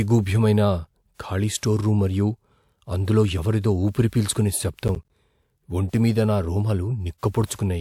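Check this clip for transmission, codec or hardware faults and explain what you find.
One fault is present. Processor overload crackle runs from 4.88 to 5.1 s. The processor kept missing its deadlines for short buffers of around 10 ms, about seven of them, each leaving a hard-edged silent gap. Together these gaps sound as a burst of crackle over the speech.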